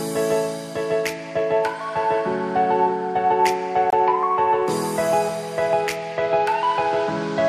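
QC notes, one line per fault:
3.90–3.93 s, gap between stream segments: a hard-edged hole of about 24 ms cuts into the sound, and playback resumes exactly where it stopped, with nothing missing. The time stamps of two adjoining segments fail to meet, so the player pads the space with digital silence; its placement fits a 4-second segment boundary. On the waveform the trace drops abruptly to near silence and jumps straight back. A spectrogram shows a thin, fully blank vertical stripe with sharp edges.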